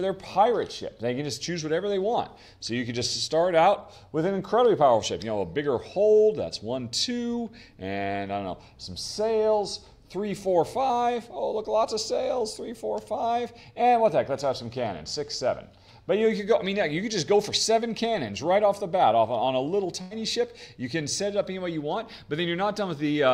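A burst of packet loss interrupts the audio at 20.01 to 20.13 s. Roughly 100 ms of signal never arrived in time, and the receiver papered over about 92 ms of it by repeating the last sound while fading it down, so the gap comes across as a held, dimming tail before the audio jumps ahead. On a spectrogram the last sound smears into a decaying band; the waveform shows a repeating pattern shrinking in amplitude, then an abrupt resumption.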